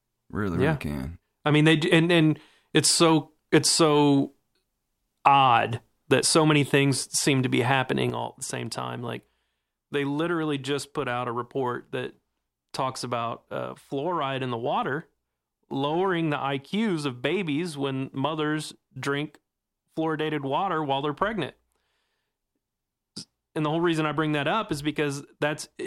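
At 8.1 s, right after "things seem to be", the whole speech signal drops in level at once by about 7 dB, and the background noise falls with it, staying at that lower level through the end of the clip. This is a sudden gain jump: the level changes between one sample and the next instead of easing down. The likely cause is a digital gain setting or bit shift applied without any ramp.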